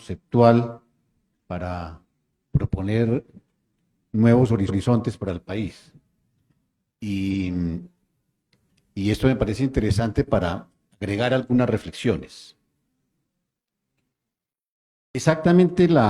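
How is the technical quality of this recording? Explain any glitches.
There are two stutters where a short stretch of audio plays twice in a row. The first, at 4.65 to 4.79 s, replays about 139 ms, and the second, at 7.29 to 7.39 s, replays about 93 ms. These are repeated frames: a block of compressed frames, which fits three and then two frames, was written or sent twice, so the decoder played it again and the recording became about 0.23 s longer.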